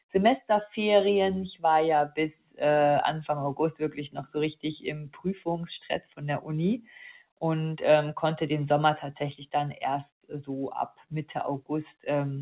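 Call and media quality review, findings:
Noise suppressor applied to music or sounds, full clip. Speech-tuned suppressor left active on non-speech material. It classifies steady content and tails as noise, producing level swings of around 10 dB. Attacks pass while sustains sink, causing audible pumping and thinning. All of this is heard within a band capped near 4 kHz by the G.711 mu-law call leg.

Sound cut by the noise suppressor, 2.35–2.61 s, 4.98–5.47 s, 6.03–6.23 s, 6.79–6.96 s, 10.89–11.13 s. Sustained or fading content is gated down, with dips of about 15, 15, 11, 9 and 16 dB respectively. Decays are truncated and onsets come through intact. The longest dip is at 4.98 s, lasting nearly half a second.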